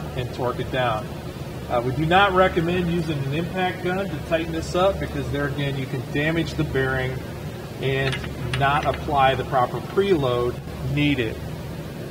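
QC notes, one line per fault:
10.59 to 10.67 s, one channel drops out: for about 90 ms the sound drops abruptly by about 6 dB and then snaps back. This is likely one stereo side briefly going silent, so the mono sum keeps only half of the shared content.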